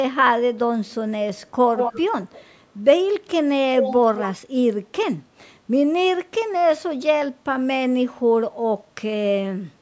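Echo leak at 1.76 to 2.03 s, 2.22 to 2.46 s and 3.81 to 3.97 s: a copy of the speech trails the original by 170 ms. It is likely an echo canceller on a loudspeaker end letting its microphone pickup slip back into the call. The first and third scraps are strong, only about 5 dB below the speech. The middle one is faint, roughly 25 dB down.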